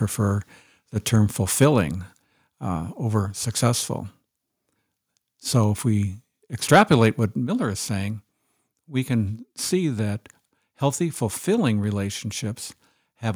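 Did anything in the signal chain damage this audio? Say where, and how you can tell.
Yes. Microphone overload at 6.73 to 6.94 s, right after "if we": the loudest syllables turn harsh and crackly. This likely happened at the converter input, where gain set about 4 dB too hot cut the tops off a small share of samples.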